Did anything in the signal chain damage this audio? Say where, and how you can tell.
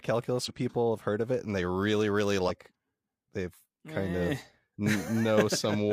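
Yes, at the codec or storage stage: damaged data in a compressed stream. Short glitches at 0.45–0.50 s, just before "people have heard of", and 2.45–2.51 s, after "and they really really", show corrupt bytes making the decoder misread frames, lose sync and search for the next header.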